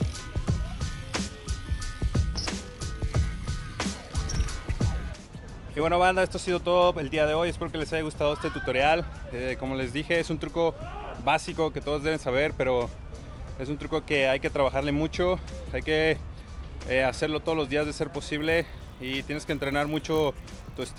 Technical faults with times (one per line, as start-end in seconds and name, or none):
18.38-20.98 resampler restarted on every block